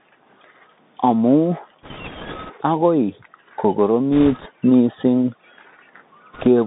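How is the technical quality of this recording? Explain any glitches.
Quality's pretty rough. The whole clip runs through a Bluetooth CVSD headset codec, squeezed to about 150 Hz to 3.7 kHz, with grainy hiss and scratchy s sounds from the one-bit slope coder, which fits a 64 kbps link.

Bit errors on a Bluetooth voice link show up at 1.83–2.53 s, 4.14–4.47 s and 6.33–6.47 s. A few percent of bits flip, each nudging the waveform slightly, giving a rushing crackle rather than loud clicks.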